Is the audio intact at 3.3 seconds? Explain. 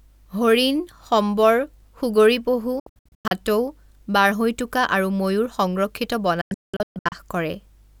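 No. At 3.3 seconds the speech is still breaking up in a digital broadcast dropout running from about 2.80 to 3.32 s, just after "হৰিণ সম্বৰ সুগৰী পহু". The sound drops out in several short holes, each muted with a very quick 3 ms fade. Together they remove about 352 ms spread over roughly half a second, and the longest single gap is 96 ms. The receiver lost its frames or rejected corrupted ones and muted until valid data returned, so everything sent in those gaps is gone.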